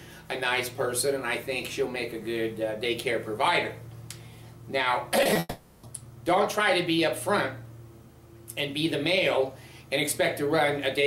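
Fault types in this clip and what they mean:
Short concealed packet loss: Brief gaps of about 20 ms at 5.23 to 5.27 s and 5.33 to 5.37 s. The receiver extended the preceding sound to cover each hole, then blended back. Each shows as a quick smear or wobble.
Long network dropout: From 5.39 to 5.85 s the sound turns into a stretched, fading continuation of what came before, about 440 ms in all, ending in a brief near-silence. A long dropout is the likely cause. The real audio then resumes.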